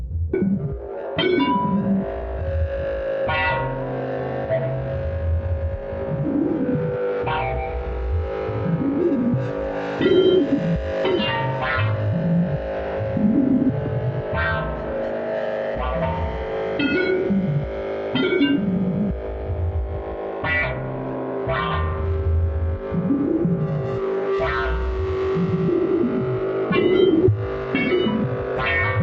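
An everyday sound recording, heard through an Opus call path that stops at about 8 kHz. At 0.33 s there is a skip ahead. Roughly a second of audio is dropped. Playback jumps straight to later material with no gap, so the two sides join almost directly. Right after, from 0.37 to 2.65 s, a jitter buffer speed-up runs the sound at 109% speed with unchanged pitch. Short pitch-period pieces are cut repeatedly, removing about 200 ms. A second speed-up, from 5.25 to 6.63 s, runs at 107% and trims about 100 ms. Both stretches sound hurried as the receiver drains excess buffered delay.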